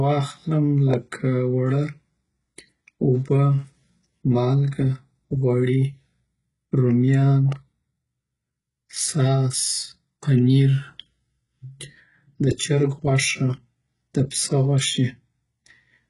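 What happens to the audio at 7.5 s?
A loud pop lands at 7.52 to 7.54 s. A sudden electrical pulse, likely from a plug, switch, static discharge or driver glitch, is added onto the signal, giving a single sharp pop a few decibels above the speech, which continues underneath.

HE-AAC compression also colours this moment, as it does the whole clip. The codec keeps the lower spectrum and rebuilds the treble by copying lower bands upward. Nothing sits above 11.1 kHz, s sounds turn gritty and metallic, and the heavy damage fits a bitrate around 12 kbps.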